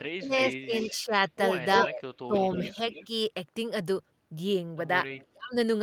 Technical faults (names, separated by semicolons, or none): speech suppressed in double talk; echo leak